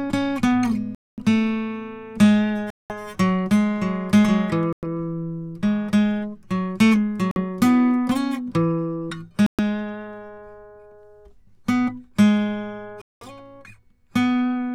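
The music drops out at 0.95 s (about 0.23 s of silence), 2.70 s (0.20 s), 4.73 s (0.10 s), 7.31 s (0.05 s), 9.46 s (0.12 s) and 13.02 s (0.20 s). Each is likely a Bluetooth stall, where delayed packets left the headphones' buffer empty. Each shows as a flat waveform gap and a blank vertical band on the spectrogram.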